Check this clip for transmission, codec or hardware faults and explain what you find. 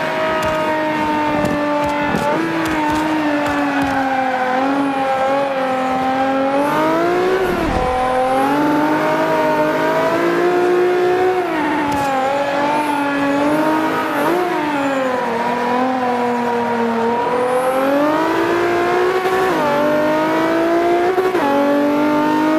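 There's one problem here, repeated frames, at four points. From 8.61 to 8.80 s a 46 ms block plays four extra times, from 11.63 to 11.84 s a 70 ms block replays three times, and at 15.94 to 15.98 s (46 ms) and 19.40 to 19.49 s (93 ms) a block repeats once. Compressed frames were sent or written more than once, so the decoder replays that slice. You hear a quick stutter, and the audio runs slightly long.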